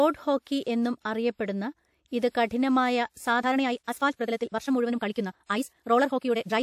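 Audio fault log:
3.37 s to the end, time-stretched section: From this point the speech suddenly runs about 1.8 times faster, yet its pitch does not rise. The pace jumps at once rather than drifting. This is likely the work of time-stretching software squeezing the section to fit a shorter length. Such software keeps pitch by cutting out short pieces of the sound and joining the rest. That is why the delivery sounds rushed while the voice stays at the same height.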